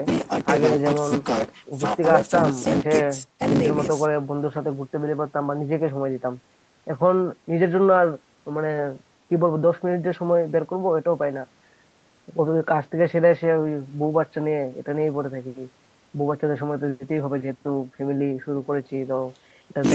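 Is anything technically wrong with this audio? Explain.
No, nothing is technically wrong with this audio.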